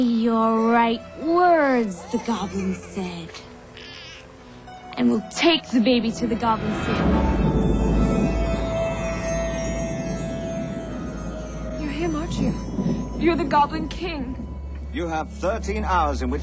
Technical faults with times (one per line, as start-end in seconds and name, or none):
none